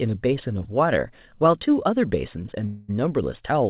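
A call audio freeze runs from 2.66 to 2.90 s. For about 0.22 s the speech stops and the receiver fills the gap with a stretched, fading buzz built from the last sound. The likely cause is packets held up in transit, draining the jitter buffer. When they arrive the speech resumes where it left off, 0.22 s later, with nothing lost. The band-limited G.711 sound, empty above 4 kHz, carries through the freeze.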